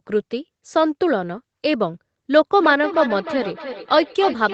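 From 2.59 s to the end, the speech picks up feedback echo between two devices. A second device is replaying this call into the same microphone, so each word returns roughly every third of a second, thinner and ringing, peaking about 10 dB below the speech.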